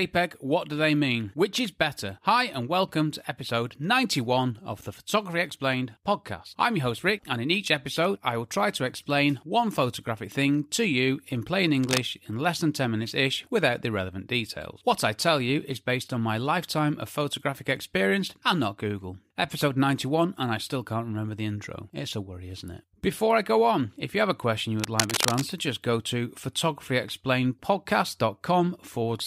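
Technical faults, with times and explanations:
11.81–12.02 s and 24.80–25.42 s, cable scratch noise: bursts of dense, uneven rustling after "to you in plain" and after "have a question you", a little below the speech and then about as loud. This is likely a worn connector or cable being moved, so its contact resistance jumps about rapidly.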